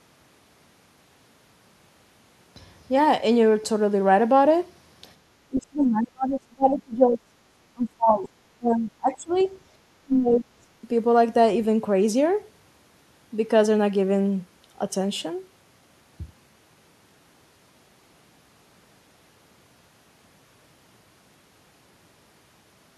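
A speech clip with echo canceller trouble in its middle section. At 5.16 to 5.22 s, the room sound dips by about 7 dB for a brief moment. This is background gated by the echo canceller. It pulls the microphone down while the loudspeaker plays, then lets go. The talker's speech is then cut hard, by roughly 30 to 35 dB, from 5.5 to 7.36 s, from 7.74 to 9.39 s, and from 10.0 to 10.49 s. This is likely speech suppressed in double talk. The canceller cannot tell the talker from the loudspeaker echo, so it turns both down. At 9.34 to 9.49 s, a faint scrap of the other side's voice leaks through, around 30 dB below the talker. Some loudspeaker echo likely slipped past the canceller into the microphone.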